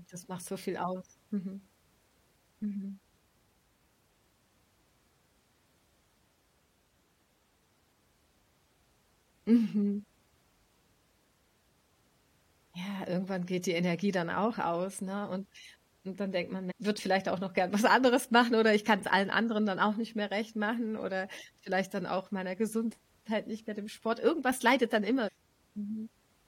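A short glitch cuts in at 16.70 to 16.72 s, between "dann denkt man" and "würde vielleicht auch noch", and again at 25.27 to 25.29 s. Both are damaged data in a compressed stream, where corrupted bytes made the decoder misread frames and lose sync briefly.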